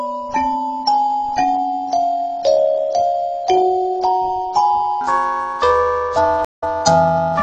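From 5.01 s to the end the sound takes on a rough, metallic edge. That is periodic clock jitter, with interference near 500 Hz shaking the converter clock and adding sidebands around every component. At 6.45 s the audio drops out for about 173 ms and comes back 24 ms earlier at 6.64 s. This is a stream reconnect, with a fresh decoder restarting mid-stream from resent data.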